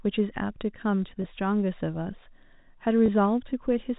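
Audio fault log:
1.22–1.24 s and 3.06–3.08 s, packet loss with pitch repetition: the speech briefly catches on a held, slightly buzzy tone for about 20 ms, because the receiver filled each gap by repeating the last pitch period, which fits one lost packet at each point.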